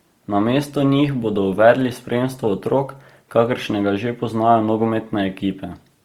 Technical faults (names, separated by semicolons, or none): Opus compression